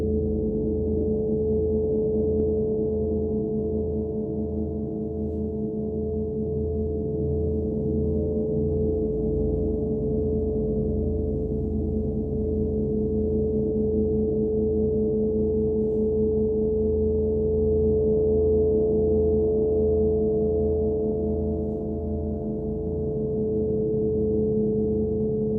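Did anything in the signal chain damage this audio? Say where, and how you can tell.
No, nothing along the chain seems to have hurt this audio; I can't hear anything that points back to a damaged stage.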